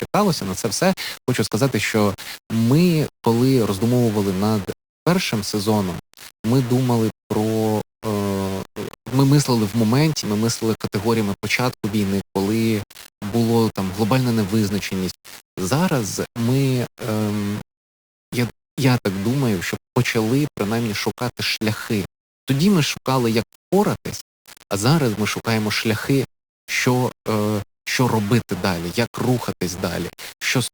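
Right through the speech there's grainy, signal-following grit, with quiet tails sputtering out, likely low bit depth without dither: rounded to 5 bits, noise only about 20 dB down.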